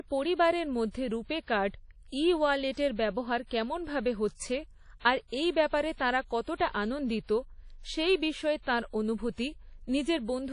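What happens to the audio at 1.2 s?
At 1.2 s, as throughout, the speech carries likely WMA compression artefacts: washy, ringing smear and signal-following hiss, fitting about 32 kbps, with a spectrogram empty above 10.1 kHz.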